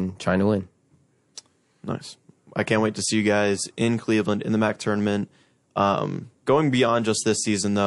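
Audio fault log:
Throughout: MP3 compression. The speech has a plainly audible watery, swirling quality. Weak frequency lines drop in and out from frame to frame. Sibilants come out as metallic chirps. This damage level fits a low bitrate around 48 kbps, the likely cause. It differs from a simple low-pass filter because the texture keeps shifting rather than just sounding dull.
1.35–1.37 s: pre-echo. A short burst of hiss, about 25 ms long and roughly 13 dB above the surrounding floor, comes just before a sharp attack, which itself sounds softened. The noise meant to be masked by the loud onset spills into the quiet moment ahead of it. That points to a long transform block of about 48 ms, with no switch to short blocks. Unlike a click or reverb, the noise comes before the attack, not at or after it.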